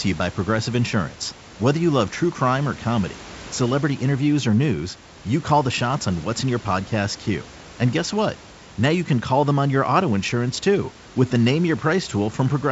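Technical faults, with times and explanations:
No technical faults, with times and explanations, are present.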